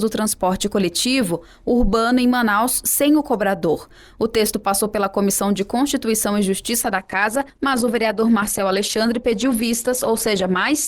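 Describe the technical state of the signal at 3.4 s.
At 3.4 s the signal is intact, with no audible fault at that moment.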